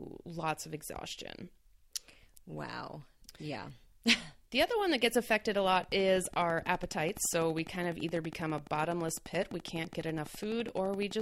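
At 5.84 s, just after "that gets affected a", a train of clicks begins and runs to 11.21 s, the very end. The pulses arrive at a steady 11.9 per second, about seventy in all. Each click has much the same sharp shape. They peak a few decibels above the speech, so the ticking sits on top of the talking and carries on through the pauses. The cause is likely electrical interference or a faulty connection or power supply injecting a repeating pulse.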